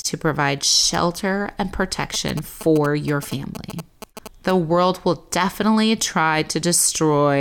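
GSM signalling bursts run from 2.14 to 4.51 s in this speech clip: a galloping dit-dit-dit of short 217 Hz buzzes, roughly 10 dB below the speech. A nearby 2G phone signalling the network is emitting radio bursts that the audio circuitry rectifies into audible buzzes.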